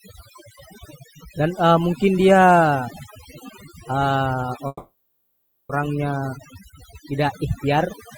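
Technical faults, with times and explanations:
Throughout: overdone noise removal. A noise reducer set far too aggressively switches off individual frequency bands whenever they sit near its noise estimate, taking quiet parts of the speech with them, so the background drops and breaks up into twinkling specks.
4.67–5.71 s: call audio freeze. For about 1.02 s the last sound is held and stretched as it fades, with roughly 30 ms of silence, before speech resumes exactly where it stopped. Nothing is lost, but everything afterwards runs about 1.02 s late. The likely cause is delayed packets emptying the jitter buffer.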